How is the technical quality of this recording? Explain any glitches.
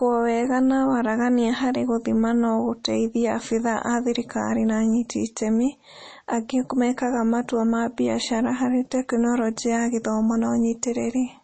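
The recording has plainly audible compression damage throughout. MP3 compression is likely: nothing above 8.4 kHz, with watery, swirly artefacts fitting a low bitrate near 32 kbps. A simple low-pass filter would dull the top without that swirl.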